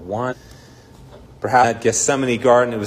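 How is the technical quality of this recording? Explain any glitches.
The recording has two short glitches of the same kind. Damaged data in a compressed stream, at 0.28–0.34 s and 1.60–1.65 s: corrupted bytes made the decoder misread frames and hunt for sync, producing brief blips.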